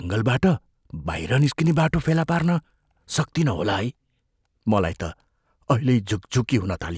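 From 1.08 s to 3.3 s, a buzz at about 50 Hz sits under the speech. This is a resampler restarted on every block. The pattern points to conversion from 44.1 kHz down to 16 kHz, done on each 20 ms block in isolation. At each block edge, the converter lacked the true neighbouring samples, so every boundary carries a small error. Fifty boundaries a second fuse into a steady buzz that rides along with the speech.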